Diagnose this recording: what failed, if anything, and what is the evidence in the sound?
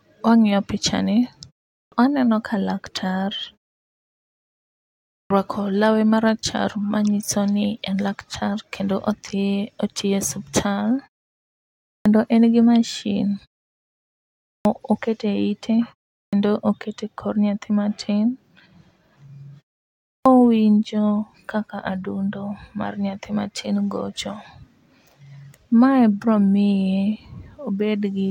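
Clipped start after a pause, at the playback stage. The output sleeps in silence and loses about 135 to 150 ms of each onset at 1.77, 5.16, 11.92 (before "en gi mashin"), 14.5, 16.19 and 20.11 s. The waveform jumps from flat straight into speech with no onset ramp.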